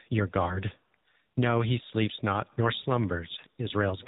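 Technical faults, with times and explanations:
Throughout, AMR narrowband mobile codec: the speech is band-limited to 8 kHz sampling, so nothing above 4 kHz survives, and a low bit budget, which fits 7.4 kbps, leaves the vocal-tract model driven by sparse pulses, giving a plainly audible buzzy, synthetic, muffled quality.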